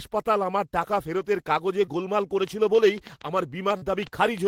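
At 1.85 to 1.89 s there is a short concealed packet loss. About 20 ms of speech never arrived in time, and the decoder bridged the gap by extending the preceding sound before blending back. The result is a brief smear or wobble rather than a sharp edge, which distinguishes it from a click.

From 2.48 s to the end, a train of clicks rides over the speech at roughly seven per second, spaced irregularly and peaking a few decibels above the speech itself. The pulses are near-identical, abrupt ticks, likely from electrical interference or a faulty connection or power supply. Their repeating shape and persistence separate them from isolated dropout artefacts.

Within that stretch, at 3.77 to 3.83 s, a second concealed packet loss of about 40 ms occurs. This longer fill is heard as a brief smear or wobble, like the first.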